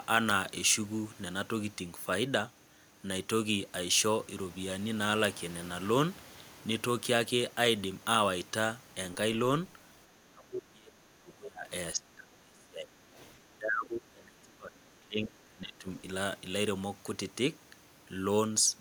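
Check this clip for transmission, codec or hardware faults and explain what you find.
Two echo-cancellation faults appear in the second half of the speech.

Speech suppressed in double talk occurs from 10.2 to 11.7 s, 11.95 to 12.93 s and 13.49 to 15.88 s. The voice sinks sharply, by up to about 35 dB. An echo canceller likely mistook the local talker for echo during overlapping far-end talk and attenuated everything.

The other side's voice leaking through appears briefly from 13.18 to 13.26 s. A faint second voice is heard about 30 dB below the talker. Residual loudspeaker echo likely slipped past the canceller into the microphone.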